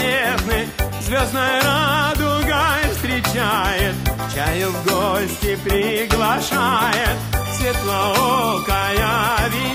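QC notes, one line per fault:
No technical faults are audible; the signal holds steady with no breaks, level problems or added noise at any point.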